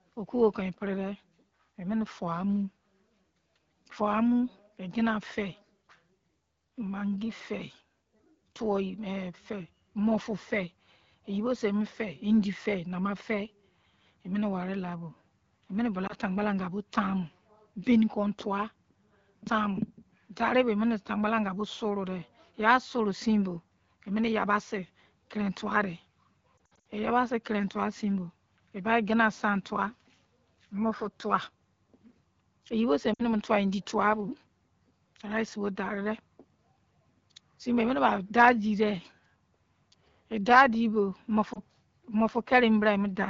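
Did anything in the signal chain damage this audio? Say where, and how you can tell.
Yes: lost AMR speech frames on the radio link, concealed by the decoder. Short dips at 16.07–16.14, 33.13–33.24 and 41.53–41.59 s, and scattered warbling, brief gaps across 26.58–26.85 s, where the decoder repeats stale pitch and vocal tract settings at falling gain.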